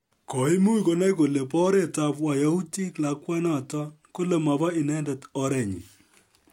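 No technical faults can be heard anywhere in the recording; the signal stays continuous and stable throughout.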